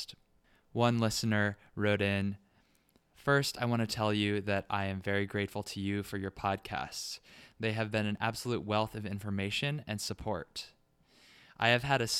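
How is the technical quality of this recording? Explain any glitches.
Two brief glitches interrupt the speech, both from overlap between stream segments. At 8.17 s, between "have been an" and "absolute wealth of information", and again at 10.16 s, right after "wealth of information and", the player trims a few milliseconds where two segments' timestamps overlap, discarding sound that was never duplicated. The waveform jumps abruptly, heard as a tiny click or skip, and a spectrogram shows a thin vertical broadband line. The roughly 2 s spacing fits 2-second segments.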